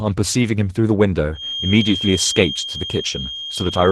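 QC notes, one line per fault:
Throughout: Opus voice compression. The speech sounds plainly hoarse and slightly robotic, with a coarse texture. This fits hybrid Opus at around 16 kbps: a linear-prediction coder handles the band below 8 kHz and a transform layer covers the top, both coding the detail sparsely.
1.30 to 3.92 s: feedback whistle. A thin, steady tone at 3.2 kHz sits roughly 10 dB below the speech, swelling and fading slowly in level until the end. The likely cause is a loudspeaker-to-microphone loop held just short of running away.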